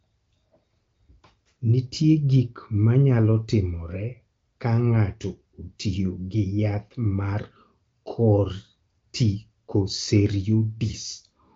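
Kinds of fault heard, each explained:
Nothing stood out on listening; the speech comes through with the band limit of wideband telephony, with no content above roughly 7.4 kHz.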